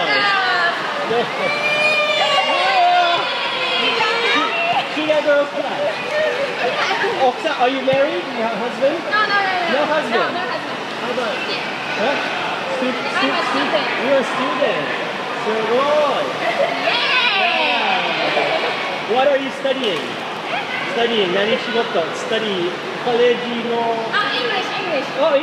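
Dropped samples, at 20.37 s, 22.83 s and 24.67 s: each is a single sharp click, seen as a thin vertical line running up the spectrum. The likely cause is a fraction of a millisecond of samples going missing from the stream, so the waveform leaps straight from one value to a later one. That gap is far too brief to remove any audible sound. Only the abrupt step in the signal is heard.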